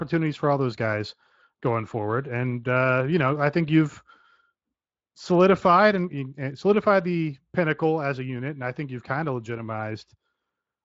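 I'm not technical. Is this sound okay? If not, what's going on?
Yes, no faults heard.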